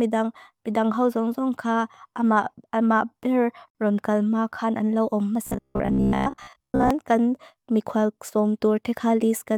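At 3.70 s the speech is broken by a gap at a join of encoded pieces, a silence of about 49 ms that ends at 3.75 s. It points to sections encoded separately and joined without trimming, so the encoder's start-up delay and end-of-stream padding both remain at the seam. The edges of the dropout are smeared, and the speech resumes from exactly where it stopped, with nothing missing.

From 5.47 s to 6.91 s the speech takes on a robotic sound from repeated short buffers, a rigid metallic buzz near 66.7 Hz that roughly follows the original delivery. The likely cause is audio arriving too seldom, with playback filling the shortfall by looping the most recent fragment. The buzz frequency fits a 15 ms buffer being replayed, and most of this stretch appears to be repeats rather than new material.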